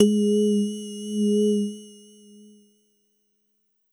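No technical faults can be heard at any point in this recording of sounds. There is nothing in it to mark with a time or a value.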